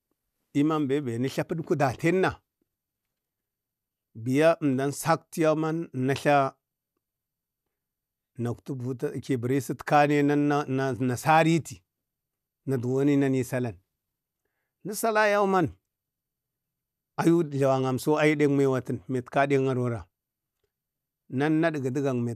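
No technical faults detected.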